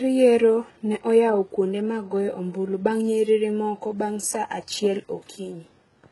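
From start to end the speech has a bright but synthetic top: s sounds come out gritty and lispy, with a metallic sheen, and nothing is present above 11.5 kHz. This is likely HE-AAC compression at heavy damage, consistent with a very low bitrate around 12 kbps. The codec keeps only the lower spectrum and fills the treble by copying lower bands upward, so the rebuilt harmonics fail to line up with the real ones.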